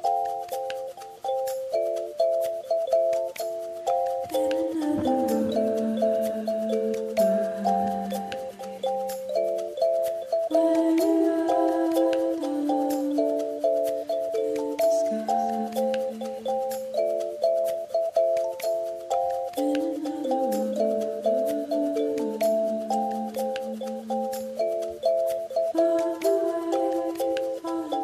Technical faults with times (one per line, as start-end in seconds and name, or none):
none